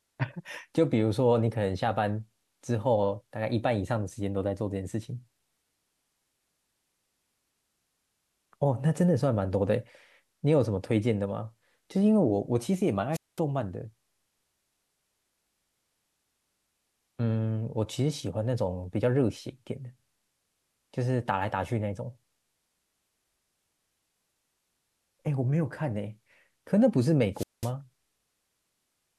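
At 13.12 s and again at 27.33 s, the speech cuts out in a wireless microphone squelch dropout. The radio signal fades, hiss rises briefly, then the receiver's squelch mutes the output. Each hole of near silence lasts about 0.2 s before the speech returns.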